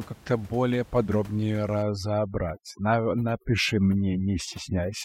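From about 1.83 s, just after "более подробнее", to the end of this speech recording, the gaps fall to near silence flecked with twinkling specks. This is overdone noise removal: frequency bands near the estimated noise floor are pushed down hard, taking quiet voice detail with them, while room noise sits about 25 dB below the speech.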